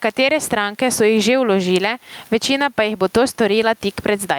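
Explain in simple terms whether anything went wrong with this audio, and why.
The microphone level was likely set far too high, so an automatic limiter keeps pulling it down on every loud sound. This is gain pumping, and it runs throughout, making the speech sound squashed.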